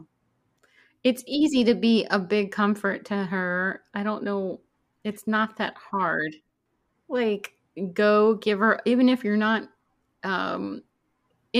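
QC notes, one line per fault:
Nothing to flag here; the speech runs along without a single fault turning up anywhere.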